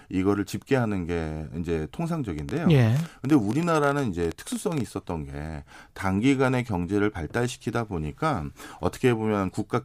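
A train of clicks runs from 2.39 to 4.81 s: around thirty similar pops, about 12 per second at uneven spacing, standing well above the speech, likely from electrical interference.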